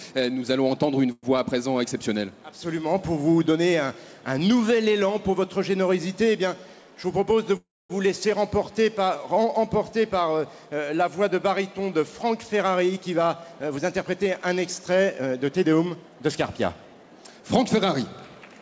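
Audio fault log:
1.12–1.26 s and 7.57–7.93 s, call audio freeze: the sound stalls into a fading buzz, with silence in the longer gap, then resumes intact, likely from delayed packets emptying the jitter buffer.
12.6–17.26 s, jitter buffer speed-up: pitch-period slices are trimmed repeatedly to shed built-up delay, so the sound runs 9% faster at unchanged pitch, losing around 0.4 s overall.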